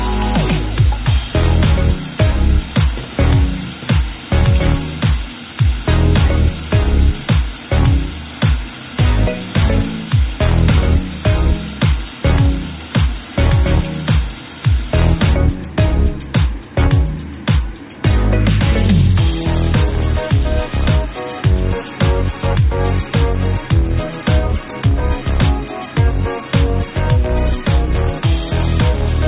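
No technical faults can be heard anywhere in this audio. It has come through a call path whose narrowband coding leaves nothing above 4 kHz, which fits a G.711 mu-law telephone codec.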